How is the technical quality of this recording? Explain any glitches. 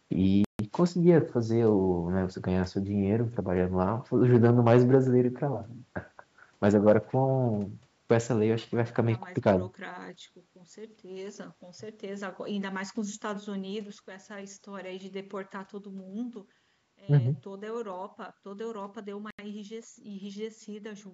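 The recording has two kinds of glitch: brief dropouts to silence near the start and end, and three short stretches of overload distortion in the middle. The audio stops at 8 kHz, consistent with call microphone processing.

Bluetooth stall, 0.45 to 0.59 s and 19.31 to 19.39 s: the speech cuts to silence for 148 ms, then 81 ms, and resumes. The likely cause is radio interference delaying wireless packets until the headphones' playback buffer emptied. Playback paused until the retransmitted data arrived.

Hard clipping, 4.34 to 4.95 s, 6.64 to 6.96 s and 9.47 to 9.51 s: the speech peaks were driven past what a stage in the chain could pass, by about 4 dB, about 2 dB and about 4 dB. The tops were sliced flat, adding high harmonics. The result is a gritty, crackling edge on the loudest syllables.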